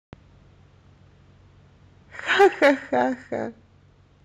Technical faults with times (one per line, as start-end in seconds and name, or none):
2.40-2.71 microphone overload
2.42 microphone volume stepped down